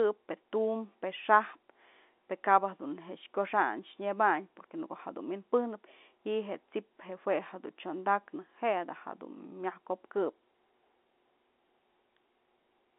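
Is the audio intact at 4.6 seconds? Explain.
Yes, at 4.6 seconds the speech runs through the ordinary G.711 telephone band without any fault.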